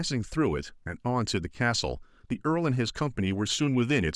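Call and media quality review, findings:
No faults found in this speech clip. No dropouts, clipping, glitches or level jumps are audible at any point.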